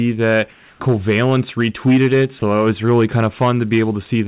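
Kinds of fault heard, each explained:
Hard clipping: throughout the speech, peaks are driven about 7 dB past what the signal path can carry, so roughly 3 percent of samples hit the ceiling and are sliced flat. Those squared-off tops generate harmonics well above the fundamental, heard as a gritty crackle riding on the louder syllables. The call path passes nothing above 4 kHz.
Comfort noise in place of the background: from 0.53 to 0.8 s, about 270 ms, the natural room sound between speech is replaced by a smooth, even hiss with none of the background's texture, sitting about 2 dB lower than the real background around it. This is likely discontinuous transmission at work: the sender's voice detector judged the gap silent and stopped sending, and the receiver generated shaped noise to fill it until speech resumed.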